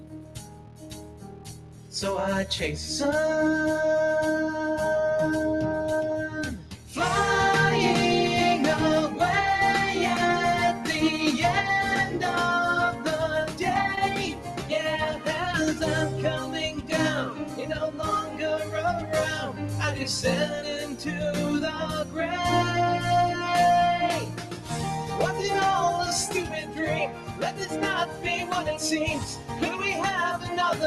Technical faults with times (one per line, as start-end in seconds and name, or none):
0.00-30.86 noise suppressor applied to music or sounds
0.00-1.94 sound cut by the noise suppressor
6.57-6.96 sound cut by the noise suppressor
12.92-15.26 sound cut by the noise suppressor
13.95-13.99 short concealed packet loss
16.43-19.64 sound cut by the noise suppressor
20.81-22.18 sound cut by the noise suppressor
24.22-25.12 sound cut by the noise suppressor
26.44-28.25 sound cut by the noise suppressor
29.31-30.50 sound cut by the noise suppressor